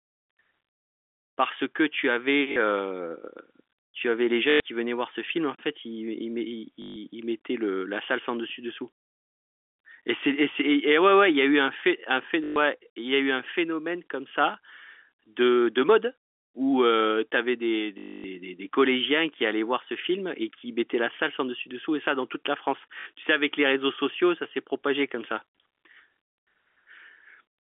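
Packet loss with last packet repeated hits at 2.52, 4.5, 6.82, 12.44, 17.98 and 23.0 s, lasting 40 to 260 ms. Lost packets are replaced by repeats. Each gap buzzes near 50 Hz, fitting 20 ms packets, under the narrow telephone band.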